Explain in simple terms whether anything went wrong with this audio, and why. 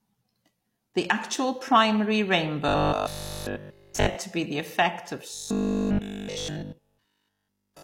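Two stretches of the speech, from 2.68 to 4.16 s and from 5.34 to 7.82 s, turn into a flat, metallic buzz, the fault called robotic sound from repeated short buffers. It likely happens because fresh audio stopped arriving in time, so the player kept replaying the last tiny slice instead. Here nearly everything in those stretches is replayed, and a 50 Hz buzz, matching a 20 ms slice, runs through the speech.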